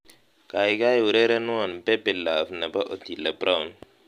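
No audible faults anywhere in the speech recording; nothing to flag.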